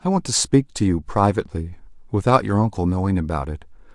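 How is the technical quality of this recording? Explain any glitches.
The technical quality of this recording holds up, with no glitches to explain.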